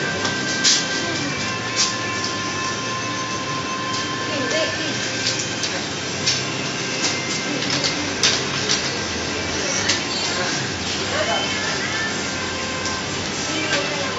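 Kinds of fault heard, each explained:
Nothing here stands out as a technical fault; the audio holds together without any glitch, dropout or odd artefact catching the ear.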